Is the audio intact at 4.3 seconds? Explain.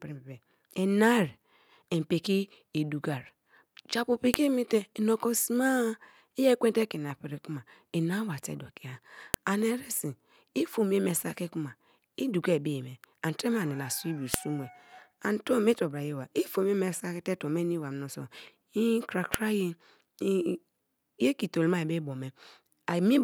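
No. At 4.34 s, two separately encoded pieces of this speech recording, each about 5 s long, were joined without stripping the second piece's WAV header, so the file header is played as audio. Those few dozen bytes of format information are read as sample values, producing a brief burst of meaningless, large amplitudes. It is heard as a sharp, loud click or snap that cuts across the speech at the seam.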